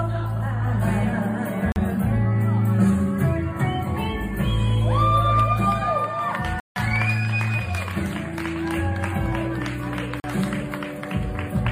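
Three blocks of digital silence drop the sound out with hard edges, at 1.72 s (40 ms), 6.6 s (160 ms) and 10.2 s (40 ms), which looks like output buffers not being filled in time.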